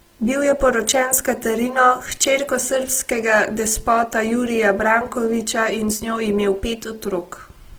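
Throughout the speech, voiced sounds turn grainy and rough, yet the spectrum stays full, reaching about 20.2 kHz. This is likely Opus compression in CELT mode at a rate fitting 16 kbps, filling starved bands with folded or noise content.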